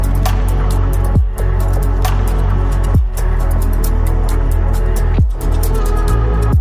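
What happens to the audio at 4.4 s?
Nothing goes wrong at 4.4 s: the audio runs through that moment intact, with no dropout, click, distortion or other fault to be heard.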